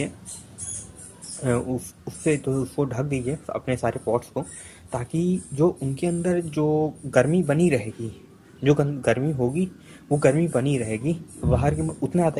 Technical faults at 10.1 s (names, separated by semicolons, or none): none